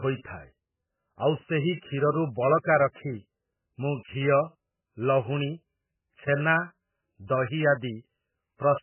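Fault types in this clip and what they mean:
MP3 compression: nothing above 3 kHz and a heavily watery, swirling texture throughout, likely from an MP3 encoder starved of bits, fitting roughly 8 kbps.
Pre-echo: codec noise spreads about 22 ms ahead of sharp attacks, heard as brief hiss and softened onsets at 2.93 to 2.96 s and 7.27 to 7.29 s.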